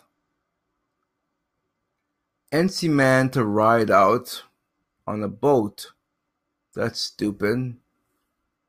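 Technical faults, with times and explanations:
No technical faults heard.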